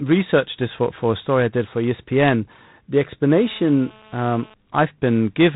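From the start the speech carries a harsh, rasping hiss that rises and falls with its level, and nothing comes through above about 3.9 kHz. This is G.726 ADPCM coding, and the amount of hiss fits 24 kbit/s, where too few bits per sample describe each prediction error.

From 3.31 to 4.54 s a hard, raspy buzz at 217 Hz, rich in harmonics and unrelated to the speech, sits steadily about 26 dB below it. This is GSM phone buzz: a nearby phone in a call transmits in bursts whose radio pulses the audio circuit rectifies.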